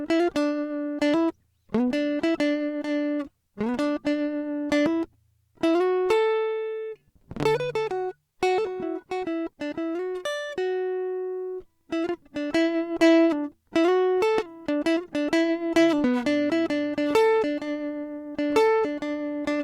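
Nothing in this music clip stands out as a technical fault; there's no glitch or dropout that catches the ear at any point.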